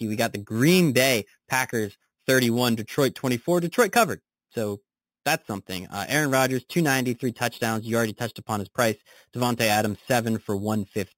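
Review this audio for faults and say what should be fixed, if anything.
Imaging from sample-and-hold upsampling runs through the whole speech clip: each sample was simply repeated, which fits an 8 kHz source raised to 48 kHz. A mirrored copy of the speech spectrum fills 4 kHz to 8 kHz at about 13 dB below the signal, heard as metallic fizz tracking the speech. On a spectrogram, harmonics reflect about 4 kHz and repeat around every multiple of 8 kHz. Zooming into the waveform shows flat staircase steps. To prevent it, upsample with a proper interpolation and low-pass anti-imaging filter rather than sample repetition.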